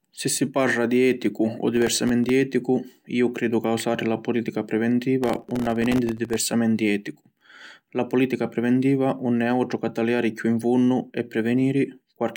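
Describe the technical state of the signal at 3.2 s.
At 3.2 s the speech signal is intact, with no dropout, distortion, glitch or other fault audible at that moment.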